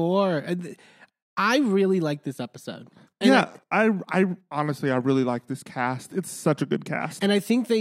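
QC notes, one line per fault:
No faults detected in this speech recording.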